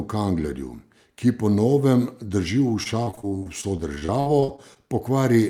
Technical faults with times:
2.83-4.77 repeated packet loss (robotic sound)

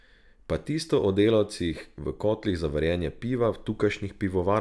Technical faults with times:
none

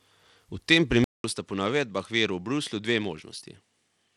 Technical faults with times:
0.00-4.17 Bluetooth SBC compression
1.04-4.17 input switched to a poorer device

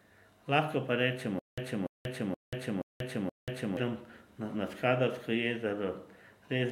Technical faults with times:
1.39-3.77 stutter with silent gaps

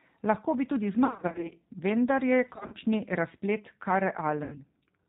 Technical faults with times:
0.00-5.09 G.729 codec
1.05-1.53 VoIP packet loss concealed by the speech codec
2.56-2.76 VoIP packet loss concealed by the speech codec
4.44-4.61 VoIP packet loss concealed by the speech codec

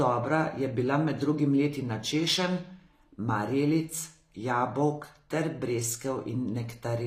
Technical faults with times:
0.00-7.06 HE-AAC compression

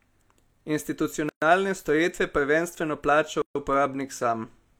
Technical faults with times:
1.29-1.42 gap at a join of encoded pieces
3.42-3.55 gap at a join of encoded pieces

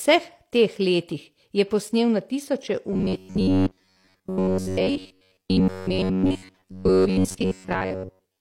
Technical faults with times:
2.93-8.40 robotic sound from repeated short buffers

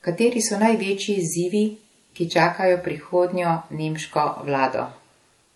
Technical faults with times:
0.00-5.55 transcoding between lossy codecs
2.38 electrical switching spike

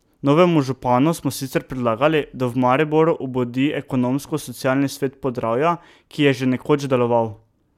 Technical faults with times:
none

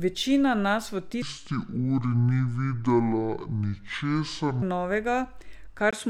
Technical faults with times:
1.22-4.62 section at the wrong speed
5.91-6.09 input switched to a poorer device

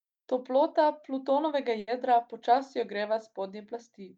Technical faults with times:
1.79-1.90 burst of packet loss

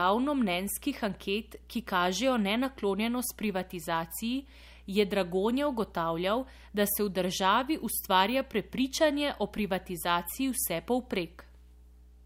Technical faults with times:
0.00-12.25 mains hum

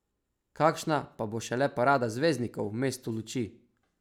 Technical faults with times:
none

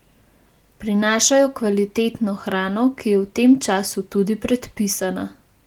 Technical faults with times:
none

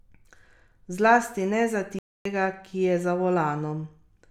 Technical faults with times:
1.99-2.25 Bluetooth dropout

